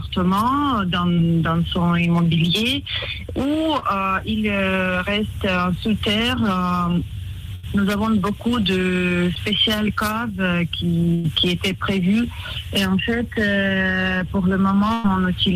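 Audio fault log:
1.13 s, 3.79 s, 9.35 s and 14.18 s: short concealed packet loss. At each of these moments, about 20 to 40 ms of audio didn't reach the decoder in time. The receiver covered the hole by carrying the previous sound forward, then crossfaded back into the real signal. Because each patch is so brief, you hear a quick smear or wobble rather than a dropout, though a short transient inside one of those gaps can simply disappear.
7.55 s, 11.14 s and 14.94 s: burst of packet loss. These are longer holes, about 80 ms at 7.55 s and about 100 ms at each of the other two. The concealer extended the last bit of sound and faded it down as the gap went on, so you get a held buzz or a dying hiss. Then the audio picks up further along, and whatever fell in that stretch is gone for good.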